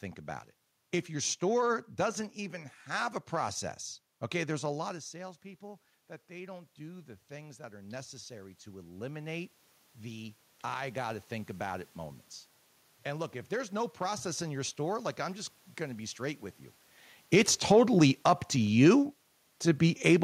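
From 4.84 to 11.92 s, after "process okay there's a", automatic gain rising lifts speech and room noise by about 11 dB, showing as a slowly widening waveform and brightening spectrogram noise floor.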